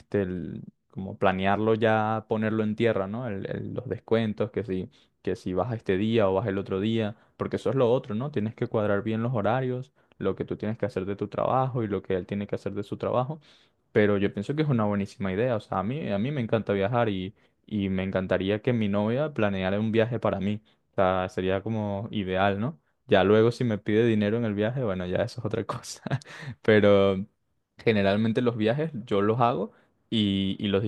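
Speech, with nothing technically wrong to report at any point.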